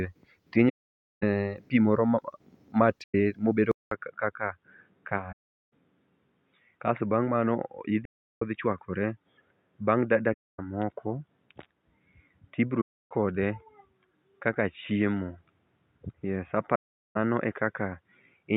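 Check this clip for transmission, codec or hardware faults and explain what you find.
Two faults are present: repeated AAC frame loss with muting, and a switch to a poorer input device partway through.

AAC frame loss with muting occurs at 0.69–1.23 s, 3.03–3.14 s, 5.32–5.73 s, 8.05–8.42 s, 10.33–10.59 s, 12.81–13.11 s and 16.75–17.17 s. The gaps last between about 0.11 and 0.53 s. The decoder zeroed the spectrum of each missing frame, and the overlapping transform windows fade the sound out and back in. That leaves soft-edged holes. The gap lengths fit runs of frames about 21 ms long.

At 3.71 s the input was likely switched to a poorer device, such as another microphone or a headset's call profile. About 200 ms of silence marks the switch. After it the speech turns dull and boxy because nothing remains above 3.8 kHz. The level also drops by a few decibels, and a faint new background noise sits well below the speech until the end.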